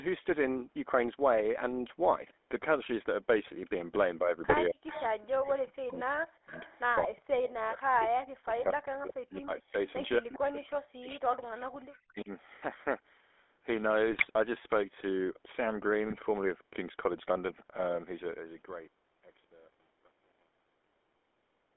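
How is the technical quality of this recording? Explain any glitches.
The recording has clear telephone-channel damage: plainly audible codec coloration throughout, plus intermittent suppression, echo and bit-error bursts between about 4 and 16 s.

GSM full-rate codec (entire clip): The voice is confined to roughly 300 Hz to 3.5 kHz and has the buzzy, gravelly texture typical of the 13 kbps GSM full-rate coder. That coder rebuilds speech from a vocal-tract filter excited by a sparse, regularly spaced pulse train. This approximation of the excitation produces the plainly audible roughness, and the narrow band removes the upper consonant detail.

Speech suppressed in double talk (4.19–6.54 s, 7.05–9.86 s, 10.19–12.30 s): Within these spans the talker's level repeatedly sags and chops out, dropping by as much as about 40 dB. The affected portions add up to roughly one and a half, three and two seconds respectively. 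The likely cause is an echo canceller facing simultaneous speech from both ends. It cannot tell the local voice from loudspeaker echo, so it attenuates everything, which leaves the voice patchy and dull.

GSM bit errors (4.48–4.56 s, 14.12–14.27 s, 16.06–16.16 s): Each burst is a short squawk or gargling pop lasting under a sixth of a second. Corrupted bits arriving over a weak radio link scramble the decoder's filter, pitch and gain parameters. The decoder then reconstructs garbled frames with a bent spectrum or a sudden level jump. The first burst is consistent with a couple of damaged frames, and the later two with a handful each.

Echo leak (4.87–5.03 s, 6.55–6.81 s, 11.13–11.21 s): Faint scraps of the voice reappear about 230 ms after the original, at about 15 to 25 dB below the direct speech. The likely cause is a far end on loudspeaker whose echo canceller let part of the microphone pickup through. 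That residue returns as a delayed copy of the voice.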